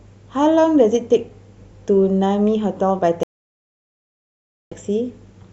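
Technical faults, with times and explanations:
0.58 s, dropped samples: A single sharp click cuts through the speech, a thin vertical streak across the spectrum. It is likely caused by roughly one missing sample, so the waveform leaps straight to a later value, far too brief to remove any audible sound.
3.23–4.72 s, stream reconnect: The speech stops dead for about 1.48 s of silence, then resumes slightly further on, roughly 70 ms of material skipped. The connection broke, the player waited, reconnected, and started a fresh decoder at a later point in the live stream.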